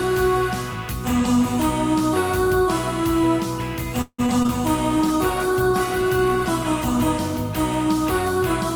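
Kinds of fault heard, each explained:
Repeated packet loss (robotic sound): From 4.01 to 4.51 s the audio breaks up in four quick holes, the longest about 170 ms. Nearly half that stretch is filled by stretching the last sound, which gives a choppy, robotic texture, and some bits just drop out.
Call bitrate drop: From 4.92 to 7.20 s the sound goes rough and dull. The encoder cut its bit budget when the call's bandwidth estimate fell, which points to a drop from around 48 to 18 kbps. Coarser coding plus lost highs gives a watery, muffled sound for about 2.2 s.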